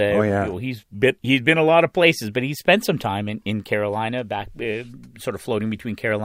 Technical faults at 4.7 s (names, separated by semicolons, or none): none